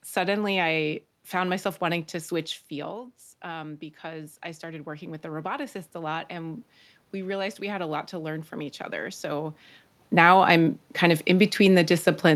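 Right after "myself wanting to switch", at 2.69 s, the talker eases back and the level drops about 12 dB. Automatic gain rising then slowly adds about 9 dB through 9.63 s, so voice and room noise swell together up to "now I'm kind of".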